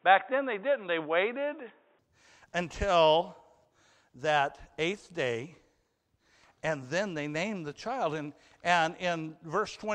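Speech, where the input likely switched to a poorer device at the start: until 1.99 s the sound is dull, cut above 3.8 kHz, a few decibels off in level, with faint added noise, then clears without a gap.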